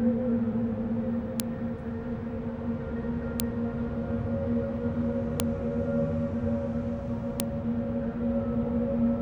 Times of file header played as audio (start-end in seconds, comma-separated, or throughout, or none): 1.40, 3.40, 5.40, 7.40